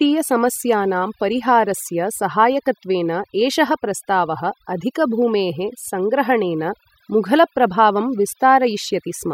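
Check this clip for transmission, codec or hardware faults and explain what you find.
One fault runs throughout the speech: overdone noise removal. An aggressive noise reducer has cut individual frequency bands down or out wherever they sat near its noise estimate, taking the softer parts of the voice too, so the background drops and breaks up into twinkling specks.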